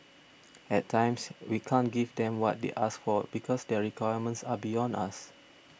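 Listening through this speech recording, nothing technically amiss stood out at any point.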